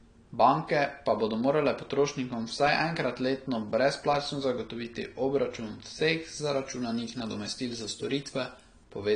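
AAC compression, throughout: nothing remains above 9.6 kHz, and the speech is dull and smeared with a fizzy edge, likely from AAC-LC at around 32 kbps.

Pre-emphasis left on, 6.23 to 8.84 s, after "letno brezplačno zagotoviti obračun": a treble boost matching a 50 µs FM curve is never reversed. The highs rise about 11 dB at 10 kHz, so the sound turns thin, bright and sibilant.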